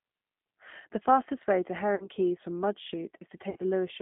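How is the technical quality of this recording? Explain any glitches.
The recording has clear telephone-codec damage throughout and two short dropouts.

G.729 codec, whole clip: the speech is squeezed into a band of roughly 150 Hz to 3.5 kHz and rebuilt from a vocal-tract model with sparse pulses. This fits an 8 kbit/s G.729A stream. The result is intelligible but audibly rough and slightly synthetic, with no air or brightness.

VoIP packet loss concealed by the speech codec, at 1.95 to 2.08 s just after "fastest way to", and at 3.50 to 3.57 s: about 50 ms and 60 ms of audio went missing. The decoder filled each gap by extending its last pitch and filter with fading gain. You hear a smeared buzzy tone or coloured noise that sags, and the speech stays weak briefly after each gap.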